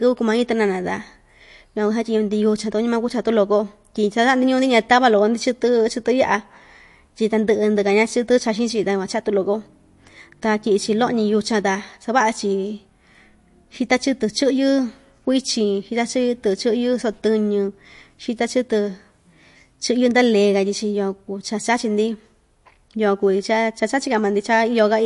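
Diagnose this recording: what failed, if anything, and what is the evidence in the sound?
The codec stage is at fault, and the damage is plainly audible across the whole speech clip. Nothing reaches above 11.3 kHz: the treble stops at a hard ceiling, as an encoder does when it runs short of bits. Weak frequency lines are dropped and return from frame to frame, which likely points to MP3 compression at a low bitrate, around 48 kbps. A simple low-pass filter would cut the top just as cleanly but would leave no such frame-by-frame artefacts below the cut.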